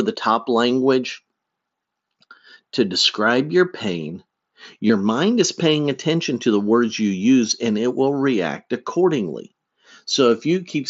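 Speech recorded over a Bluetooth headset link, carrying the band-limited, slightly grainy character of the mSBC wideband codec, with one instance of concealed Bluetooth headset packet loss at 4.88 s. About 15 ms of audio failed to arrive, which fits two consecutive lost packets, and the receiver covered the gap by repeating the closest-matching recent stretch of waveform. This short run of losses leaves a brief buzzy smear and a slight warble as real audio resumes.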